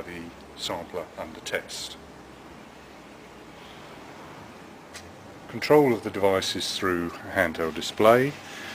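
No dropouts, glitches, distortion or level jumps turn up anywhere in the clip.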